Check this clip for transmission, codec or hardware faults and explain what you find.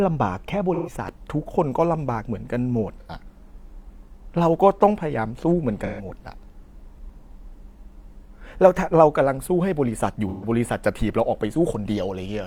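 The speech has four short dropouts, all consistent with AAC frame loss with concealment, at 0.74–0.92 s, 3.00–3.10 s, 5.86–6.05 s and 10.29–10.48 s. The decoder is missing data there and papers over the hole by reusing the last good spectrum with randomised phase, so each gap sounds briefly smeared and phasey. The missing spans of about 128 ms (85 ms for the second) fit runs of three or two lost frames. On a spectrogram they show as blurred, harmonically frozen blocks. In the waveform they appear as brief noisy patches.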